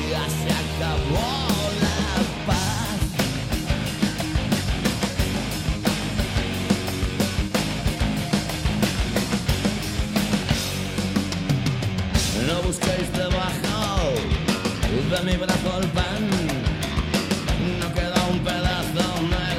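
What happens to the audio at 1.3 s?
Nothing goes wrong at 1.3 s; the audio there plays through intact, with no dropout, click or other fault.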